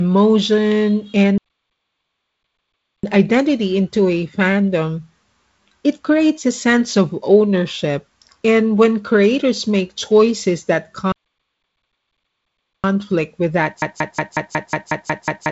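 At 1.38 s the player most likely ran short of data or had its output thread blocked, and the result is a playback stall. The speech cuts off in mid-flow and the output goes silent for about 1.66 s, until 3.03 s, when the sound resumes. The same thing happens again from 11.12 s to 12.84 s, a gap of about 1.72 s in which the audio simply stops and then picks up again.

At 13.82 s the player, encoder or stream likely stalled again, but this time it kept resending the last fragment it held instead of going quiet. The result is a broken-record loop: a piece of about 182 ms repeats exactly, back to back, nine times, and the loop runs to the very end of the clip. Whatever speech should have followed is lost. All of this sits on top of the wideband telephone coding, which carries nothing above about 7.7 kHz and adds a light trace of G.722 coding noise.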